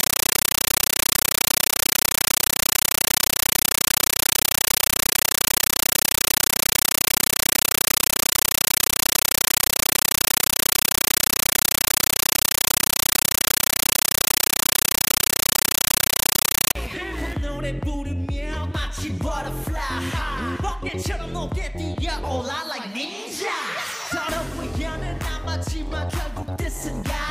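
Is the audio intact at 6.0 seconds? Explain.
No. From 0.0 to 16.75 s, loud chattering static replaces the sound, pulsing 31.25 times a second in bursts of about 9.3 ms. This is a compressed stream played as audio: a Dolby Digital stream taken for samples, with its padded data frames reproduced undecoded.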